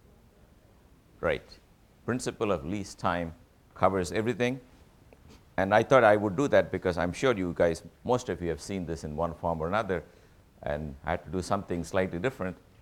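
Nothing goes wrong anywhere in this audio, so there's no technical fault to describe.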